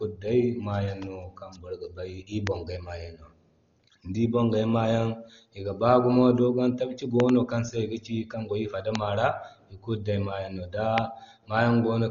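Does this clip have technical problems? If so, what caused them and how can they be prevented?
Yes. The speech sounds dull and rough throughout. Nothing is heard above 7 kHz, and tones carry a fluttering noise. This is likely Dolby Digital compression at a very low rate, which fits about 32 kbps. The encoder drops the top band and fills starved lines with noise. Encoding at a higher bitrate prevents this.

There are loud pops. A single pop at 2.47 to 2.49 s comes just before "bongay ma". A double pop follows at 7.20 to 7.31 s. Another single pop at 8.95 to 8.97 s comes just after "kan go i", and a last one at 10.98 to 11.00 s. Each peaks roughly 20 dB above the speech, which continues underneath. The likely cause is a voltage step from a plug, a switch or static. Securing connections and muting before switching prevents them.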